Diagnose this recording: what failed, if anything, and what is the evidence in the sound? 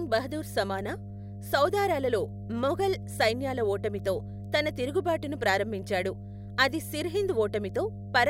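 The analogue wiring picked up mains hum: a steady 50 Hz drone runs under the speech from start to finish, sitting only around 10 dB below it. That points to a ground loop or a nearby transformer leaking the power line straight into the signal path.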